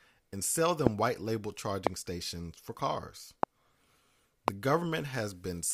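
A single loud pop lands at 0.87–0.89 s, between "and sell" and "white label", and the same thing happens again at 1.87–1.89 s just before "stations for cars", at 3.43–3.45 s right after that phrase, and at 4.48–4.50 s. Each is one short, sharp pulse about 25 dB above the speech, which carries on underneath. They're most likely voltage spikes from a switch, connector or driver glitch getting into the signal chain.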